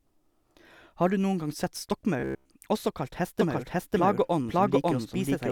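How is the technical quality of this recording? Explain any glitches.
The recording has two clear glitches: a brief robotic stretch and a doubled track that runs through the final two seconds.

From 2.2 to 2.5 s, between "du noen gang sett" and "også kalt", the speech collapses into a rigid metallic buzz near 67 Hz. This is robotic sound from repeated short buffers, likely a 15 ms chunk looped while the real audio was skipped.

From 3.39 s to the end, just after "også kalt", a doubled audio track appears. An equally loud, full-band copy trails the original by roughly half a second and starts abruptly. The likely cause is a slower second capture path mixed back in.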